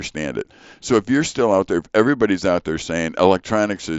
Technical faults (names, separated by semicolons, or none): none